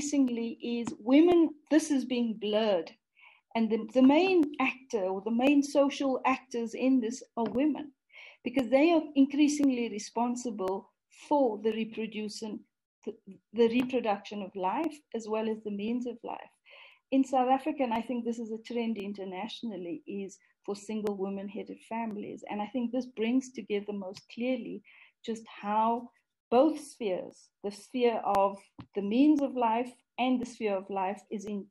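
Clock drift buffer slips run from 0.28 s to 31.47 s: a regular click roughly every 1.04 s, about thirty in all. Two devices likely run on mismatched clocks, around 700 ppm apart, so a buffer periodically drops or repeats a block of roughly 30 samples.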